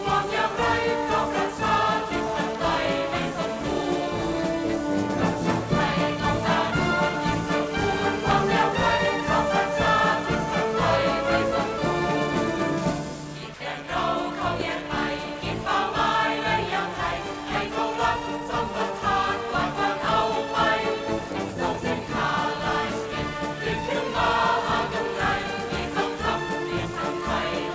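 The audio came through a G.722 call path with nothing above 8 kHz. From 7.83 to 8.69 s a GSM phone buzz intrudes, a hard, raspy 217 Hz tone only about 11 dB below the signal, steady because the phone was in a call. It shows as a comb of evenly spaced harmonic lines on a spectrogram. At 13.54 s a 60 ms stretch turns to flat, featureless noise, likely sound dropped by the voice detector and filled with comfort noise. It appears as a short, uniform grey patch with no structure.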